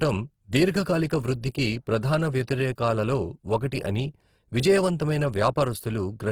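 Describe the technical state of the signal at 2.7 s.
At 2.7 s, as across the whole clip, Opus compression likely near 16 kbps fills starved bands with folded or noise content, making the speech plainly grainy and rough.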